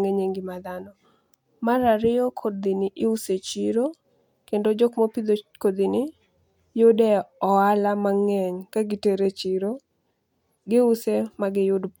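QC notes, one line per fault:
No faults heard in this speech clip.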